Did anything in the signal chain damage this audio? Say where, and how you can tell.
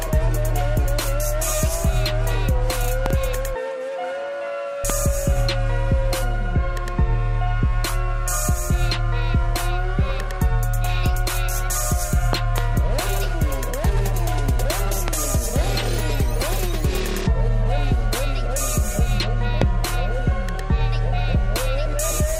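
Yes: loud pops at 3.06–3.13 s and 12.33–12.60 s as pairs, and singly at 4.90–4.92, 15.08–15.10 and 19.62–19.64 s, about 15 dB above the sound. A voltage step, likely a plug or switch in the analogue wiring, adds pulses: narrow waveform spikes, full-height spectrogram lines.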